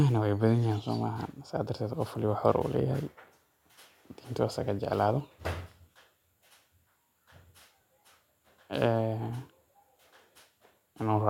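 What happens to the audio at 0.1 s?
At 0.1 s the speech plays through cleanly, with no dropout, click, distortion or other fault at that moment.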